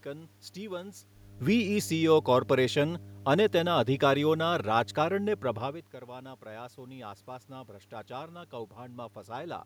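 Mains hum runs through the whole clip as a steady low tone at 50 Hz, roughly 20 dB below the speech. A ground loop or a nearby transformer is coupling the power line into the signal path, so the buzz never lets up.

Automatic gain rising occurs from 6.05 s to 9.04 s. After the talker's natural change in distance around 5.5 s, the input falls by about 15 dB. The gain control then raises its gain by about 4 dB over those three seconds, so the speech and the room noise swell together.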